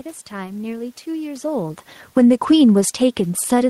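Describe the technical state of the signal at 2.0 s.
Automatic gain falling begins at 2.02 s and lasts to the end of the clip. The gain control has judged the input too loud, or its background noise too strong, and is pulling its gain down gradually, so the speech sinks in level along with the room noise beneath it. On the waveform the envelope tapers steadily. On a spectrogram every band, including the noise floor, fades together. That shared fade separates it from the earlier level change near 1.5 s, where the talker moved.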